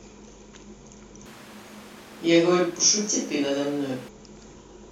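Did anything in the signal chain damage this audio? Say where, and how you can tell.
Yes. At capture, the close mic likely failed; a switch to a distant microphone from 1.26 to 4.09 s leaves speech roomy, thin, noisier and about 5 dB quieter.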